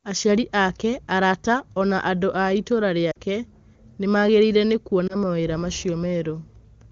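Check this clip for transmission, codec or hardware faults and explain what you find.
Two short dropouts from lost AMR speech frames. Around 3.11 to 3.18 s, right after "na andũ a itũũra", and again at 5.07 to 5.16 s after "nĩ maagegire nĩ", the decoder hit corrupted frames and filled in by repeating the last good pitch and vocal-tract settings at falling gain. You hear the first gap drop to near silence and the second as a brief dip or warble, with the voice a touch weak coming back. The first gap fits roughly two missing 20 ms frames, the second a single frame. The wideband codec itself sounds like it's running at its top rate, with clean HD Voice quality around those gaps.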